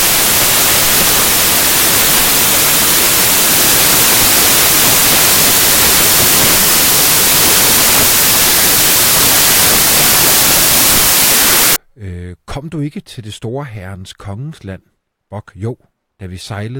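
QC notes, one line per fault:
0.00–11.76 s, samples built from the wrong bytes: the speech is replaced by loud, harsh broadband noise, close to white on loud passages, because each sample's bytes are being assembled in the wrong order or offset, so the rapidly changing low-order bits land in the most significant position. Unlike ordinary background hiss, the noise is not a steady floor under the speech. Clean speech returns abruptly at 11.76 s.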